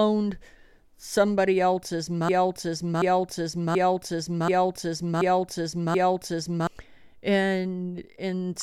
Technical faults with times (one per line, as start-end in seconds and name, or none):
2.29-6.67 broken-record loop